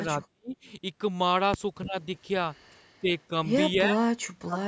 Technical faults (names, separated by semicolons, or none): speech suppressed in double talk